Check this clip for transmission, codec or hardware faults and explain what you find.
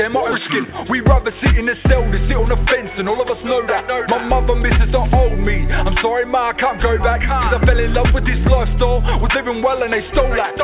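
Two transmission faults are audible, both in the first few seconds, on a call path that carries the sound through G.711 mu-law coding at 64 kbps with nothing above 4 kHz.

Skip ahead, 0.32 to 0.34 s: about a second of audio never reached playback, lost in transit or discarded by an overflowing jitter buffer while later audio was already queued. Nothing fills the hole, so the sound on either side is butted together almost directly. It comes across as an abrupt jump forward, with the material in between simply gone.

Jitter buffer speed-up, 0.48 to 3.38 s: the buffer was holding more audio than its target, so the receiver trimmed it back by cutting out short pieces, each one or a few pitch periods long, over and over. Roughly 150 ms was removed in total, and playback runs at 105% of normal speed with the pitch unchanged. Across those three seconds the sound feels slightly rushed before settling back to its natural pace.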